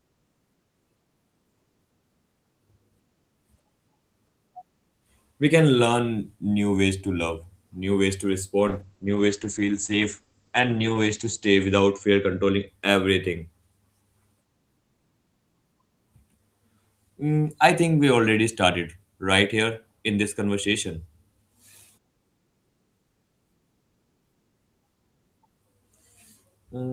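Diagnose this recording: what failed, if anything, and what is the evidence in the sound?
A call bitrate drop, originating at the network stage and carried out by the codec, runs from 8.68 to 12.73 s. The speech turns muffled and watery, at its worst for about 2.3 s. On a spectrogram the content above 8 kHz disappears abruptly, leaving a flat ceiling where the band had reached 20 kHz, and then returns. The sound fits the encoder being told to cut from about 32 to 11 kbps after the bandwidth estimate fell, forcing coarser coding and a narrower band.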